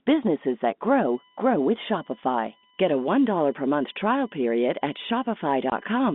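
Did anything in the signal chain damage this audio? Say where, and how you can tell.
Yes. From 1.0 s to the end, USB whine leaks in through the analogue power or ground: a steady 1 kHz tone with harmonics, strongest at 3 kHz, faint under the speech. It shows as fixed horizontal lines on a spectrogram.

At 5.70 to 5.72 s, packet loss filled with silence cuts a 20 ms hole in the network stage, which fits two lost 10 ms packets. The waveform drops flat there, with hard edges.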